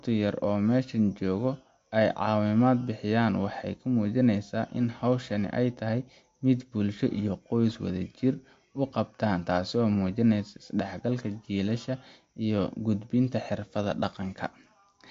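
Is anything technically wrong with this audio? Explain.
Yes. MP3 compression damage runs throughout the speech, and it is plainly audible. The sound has nothing above 7.6 kHz, which fits a low bitrate around 48 kbps. The likely cause is an MP3 encoder starved of bits. It cut the treble at a fixed point and dropped weak frequency lines, which then flicker in and out from frame to frame. The result is a watery, swirling texture, metallic chirps on s sounds, and smeared consonant attacks.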